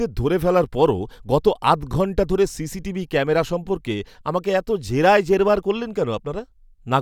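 No technical faults can be heard anywhere in this speech.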